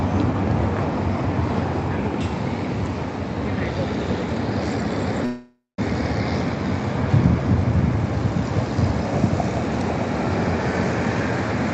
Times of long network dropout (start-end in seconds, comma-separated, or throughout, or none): 5.25-5.79